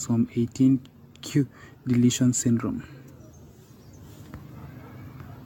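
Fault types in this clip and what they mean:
Generation loss: The speech sounds swirly, smeared and hollow throughout, more than one lossy encode would leave. Consonant attacks are blurred rather than crisp. Nothing is present above 17 kHz. The character fits an AAC-LC chain at around 96 kbit/s. The likely cause is repeated decoding and re-encoding, on the order of ten passes. Each pass quantises again on a shifted frame grid. Noise and spectral holes accumulate with every generation.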